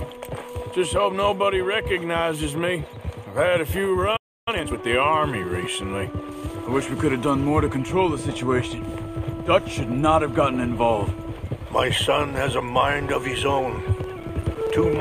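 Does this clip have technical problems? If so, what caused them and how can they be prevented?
Yes. A playback stall runs from 4.16 to 4.48 s: the sound breaks off mid-flow and the output is silent for about 300 ms before it resumes. The likely cause is that the player's buffer ran dry or its audio thread was blocked. On a waveform this is a flat, silent stretch with abrupt edges; a spectrogram shows a clean vertical gap across all frequencies. A deeper jitter buffer and keeping blocking work off the audio thread would prevent it.

Time-compressed catch-up follows immediately, from 4.48 to 4.78 s. The player clears its backlog by playing at twice normal speed, cutting out short pieces and cross-fading the rest, so the sound is hurried but keeps its pitch. A spectrogram shows compressed, denser temporal detail and small seams at the splice points, with no shift in frequency. Preventing the preceding underrun removes the need for this catch-up, and a gentler speed-up rate would make it less audible.

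Processor overload crackle occurs from 14.04 to 14.70 s. The audio processing repeatedly failed to finish each small buffer on time. The pattern fits buffers of roughly 5 ms with around ten misses across that span, each missed block output as silence. The result is a gritty, tearing crackle over the sound. On a waveform, short flat dropouts with hard edges are scattered through the passage. A spectrogram shows thin broadband vertical streaks at each gap. Larger buffers, fewer competing processes and a real-time priority for the audio thread would prevent it.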